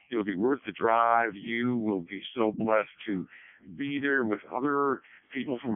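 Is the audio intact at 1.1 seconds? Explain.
No, at 1.1 seconds you're hearing the Codec 2 vocoder, which runs through the whole clip. The decoder rebuilds speech from sine waves using only pitch, voicing, energy and envelope, so it's heavily robotic and buzzy, squeezed into roughly 150 Hz to 3.4 kHz with nothing above 3.5 kHz. That level of damage fits the 0.7 kbit/s mode.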